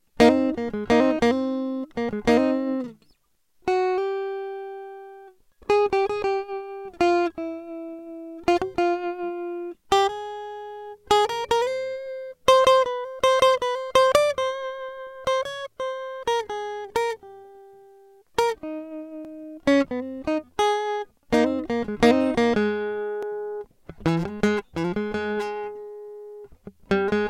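A recorder or processor handling the audio in roughly 4-second chunks is likely dropping a short slice each time it closes one chunk and opens the next, leaving audio missing between chunks in this music clip. Around 20 ms goes missing at 7.32, 11.30, 15.27, 19.25 and 23.23 s, and the two sides are butted together with no gap. The music skips forward slightly at each point, a regular hiccup every 4 seconds.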